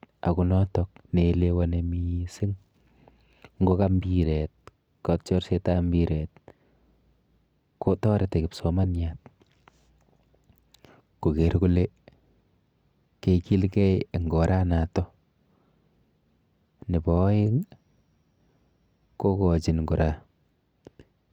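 Nothing in this speech recording stands out as a technical fault at any point, so there's nothing here to flag.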